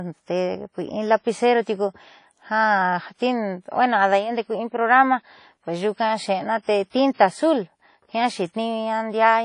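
Throughout the speech, the audio has most likely passed through WMA compression at a low bitrate, consistent with roughly 32 kbps. The transform coder smears quantisation noise across long blocks and discards weak detail, so the speech rings and washes, a hiss breathes with the signal, and nothing remains above 10.1 kHz.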